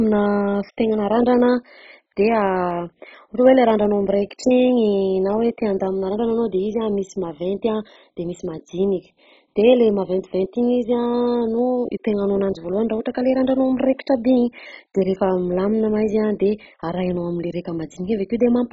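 It's a speech recording, and the whole clip sounds dull and gurgly, with nothing at all above 7.5 kHz and a grainy, watery texture where the remaining upper bands seem to flicker in and out. That's heavy MP2 compression, likely at a very starved rate, something around 16 kbps, so the encoder simply switched off the top sub-bands and quantised what was left very coarsely. On top of that there are clock slip clicks running from about 0.1 s right through to about 18.7 s: faint, evenly spaced ticks roughly every 70 ms, a couple of hundred of them, clearest under the louder passages. Each one is a single sample dropped or repeated, which points to two devices free-running on separate clocks, likely off from each other by something like 300 ppm.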